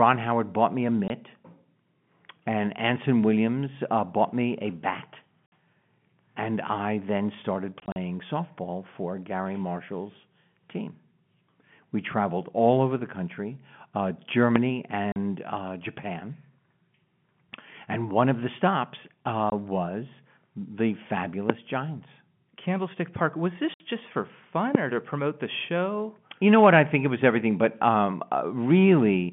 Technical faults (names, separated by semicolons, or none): packet loss filled with silence; loud pop